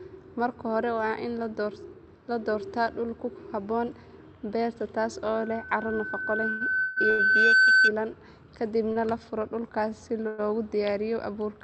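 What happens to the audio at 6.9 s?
At 6.9 s the audio is caught in two overlapping faults. A loudspeaker feedback squeal runs from 5.34 to 7.93 s: a steady 1.5 kHz tone swells over roughly two seconds until it sits about 10 dB above the speech. A microphone is picking up the loudspeaker it drives, and at 1.5 kHz the loop gain exceeds one, so that frequency keeps growing until the amplifier limits it or the loop is broken.

Inside that squeal, from 6.80 to 6.98 s, a call audio freeze stalls the sound for about 160 ms. The last fragment is drawn out as a fading buzz or hiss rather than silence, and then the audio resumes exactly where it stopped, with nothing lost but a delay added. This is likely packets held up in transit, which emptied the jitter buffer so the receiver had to extend what it already had.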